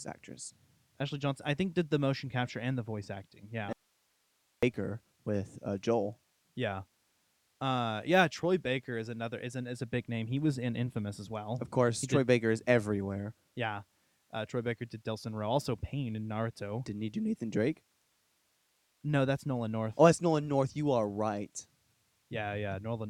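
At 3.73 s the speech cuts off abruptly, leaving faint hiss about 45 dB down until 4.63 s: an audio dropout to a faint residue, likely the signal lost while the path stayed live. The waveform shrinks to a thin band, and the spectrogram shows a sharp-edged gap.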